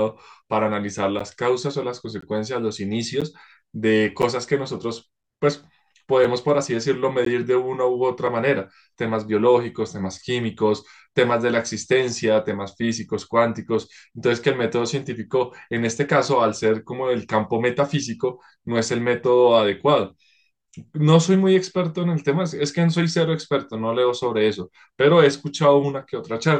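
Hard-edged silent dropouts, about 3 to 17 ms long, cut into the speech once a second at 1.19, 2.21, 3.21, 4.22, 5.23, 6.24, 7.25 and 8.27 s: gaps between stream segments, where one-second segment timestamps leave holes filled with silence.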